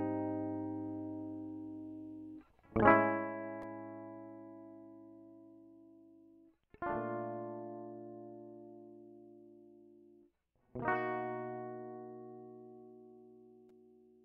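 Zipper noise runs from 2.88 to 3.31 s in this music, while the level drops by around 10 dB. Instead of gliding down, the gain falls in a rapid staircase of small jumps, a couple of hundred per second, with no smoothing between them. Each jump leaves a tiny discontinuity in the waveform, so a fine buzzy ticking rides on top of the music for that fraction of a second.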